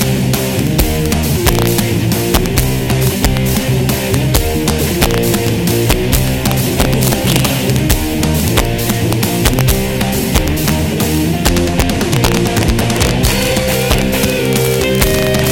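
Integer overflow runs through the whole clip. The signal has been pushed about 2 dB past the largest value the integer format can hold, and instead of being limited, each sample that crosses that ceiling wraps around to the opposite extreme. Only a small fraction of samples, around half a percent, go over, so the damage lands on the loudest peaks: sudden violent cracks, far harsher and more abrupt than ordinary clipping, wherever the audio hits its highest levels.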